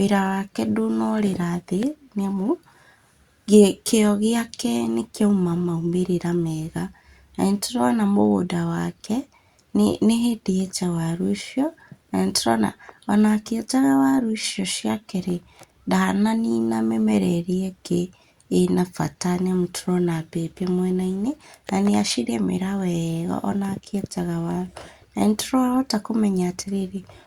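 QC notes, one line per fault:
0.11–27.23 s, clock slip clicks: A faint, regular tick runs through the speech about every 50 ms, giving a soft rattle on louder passages. Each tick fits a single sample being dropped or repeated. The likely cause is two unsynchronised clocks drifting apart by roughly 400 ppm.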